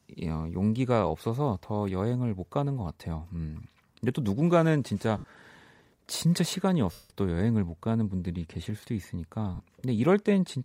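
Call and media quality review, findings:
Lost LE Audio frames at 5.18 s (60 ms), 6.92 s (180 ms), 9.55 s (50 ms): LC3 concealment repeats last spectrum with random signs, giving a noisy smear; the 180 ms gap fades out.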